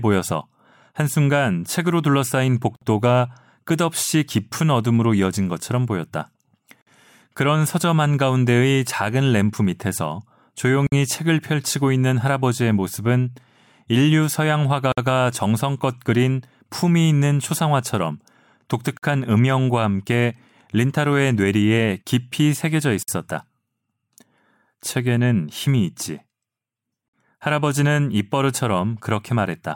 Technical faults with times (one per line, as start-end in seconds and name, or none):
2.76-2.81 gap at a join of encoded pieces
6.81-6.87 gap at a join of encoded pieces
10.87-10.92 gap at a join of encoded pieces
14.92-14.97 gap at a join of encoded pieces
18.97-19.03 gap at a join of encoded pieces
23.03-23.08 gap at a join of encoded pieces
27.08-27.13 gap at a join of encoded pieces